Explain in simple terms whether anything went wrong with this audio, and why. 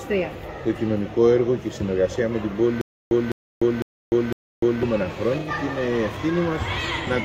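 Stutter with silent gaps, from 2.81 to 4.83 s: a 0.2-second fragment repeats four times, every half second, with silence between. Playback likely stalled and kept replaying its last piece.

AAC frame loss with concealment, at 5.39 to 5.50 s: about 85 ms went missing, consistent with two lost frames. The decoder guessed the gap from earlier sound, leaving a brief smeared patch.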